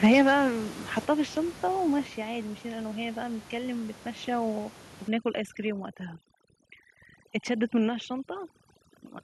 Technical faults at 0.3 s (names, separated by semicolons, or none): microphone overload